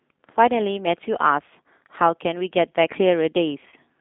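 Throughout, the speech carries G.729 codec damage. The coder rebuilds each 10 ms frame from a vocal tract filter, a pitch predictor and a handful of pulses, so the voice comes out plainly rough and slightly synthetic, which points to an 8 kbit/s rate. The line band runs from 150 Hz to 3.6 kHz. A spectrogram shows a hard ceiling near 3.6 kHz, almost no energy below 150 Hz, and a smeared, grainy harmonic structure.

From 3.69 to 3.75 s comes VoIP packet loss concealed by the speech codec. About 30 ms of audio went missing, which fits a single lost packet. The decoder filled the gap by repeating its last pitch period and filter shape at a falling gain, so the sound turns into a brief buzzy tone or coloured noise that fades. Because each frame builds on the one before, the voice stays weak or distorted for tens of milliseconds or more after 3.75 s. On a waveform the section shows as a short run of near-identical periods shrinking in amplitude. 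A spectrogram shows flat, static harmonics there instead of moving formants.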